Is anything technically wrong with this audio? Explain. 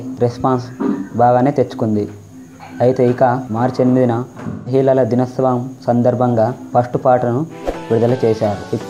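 Yes. From 4.49 to 4.73 s there is AAC frame loss with concealment, which fits about four frames going missing. The decoder patched the gap by reusing the last good spectrum with scrambled or interpolated content, so the audio turns briefly smeared and noisy.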